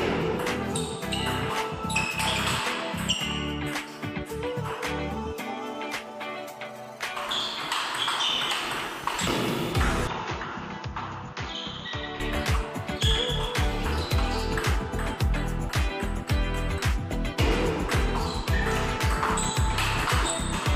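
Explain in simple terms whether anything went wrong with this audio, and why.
From 10.07 to 12.20 s the sound turns dull and slightly quieter, then clears. That's likely an input switched to a poorer device. Unlike a simple volume dip, the tone changes too, with no gap.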